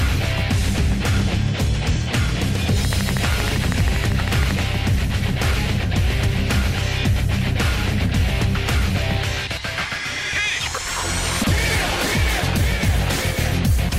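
From 2.85 s to 4.60 s a steady ticking rides over the sound: a train of clicks, about twenty near-identical pulses at a regular 12.6 per second, standing roughly 10 dB above the audio. This is likely interference from nearby equipment or a faulty connection or power supply.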